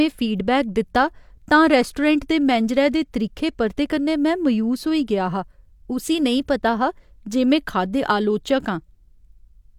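Speech recording, no technical faults heard anywhere in it.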